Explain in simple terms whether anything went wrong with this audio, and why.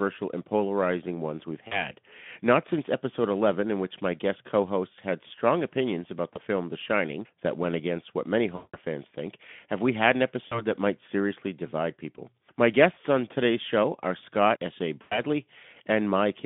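VoIP packet loss concealment shows up six times: at 1.67 to 1.91 s after "and polarizing ones we've", 6.34 to 6.39 s after "had strong opinions about", 8.55 to 8.77 s, 10.47 to 10.66 s between "have we had an" and "that might seriously divide", 12.93 to 12.98 s, and 15.01 to 15.20 s. Speech data went missing, and the narrow-band Speex decoder filled each gap by stretching the last sound into a fading buzz or noise. The longest gap, near 8.6 s, lost about 180 ms.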